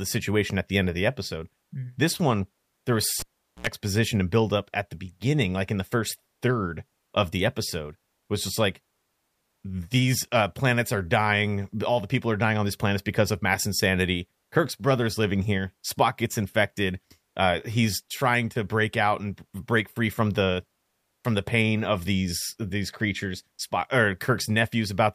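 At 3.20 s a pop cuts the speech to near silence for 0.42 s. A 77 ms burst of 60 Hz mains buzz and a second pop bring it back by 3.67 s. A live cable was pulled and plugged in, and the buzz came while only the plug tip touched.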